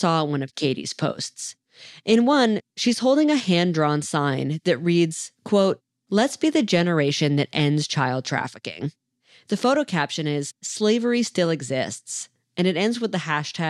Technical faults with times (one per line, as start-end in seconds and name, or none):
none